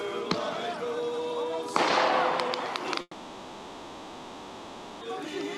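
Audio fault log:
3.01–5.03 s, long network dropout: the last sound smears into a fading hiss, then 40 ms of silence. About 2 s is lost, likely from undelivered packets.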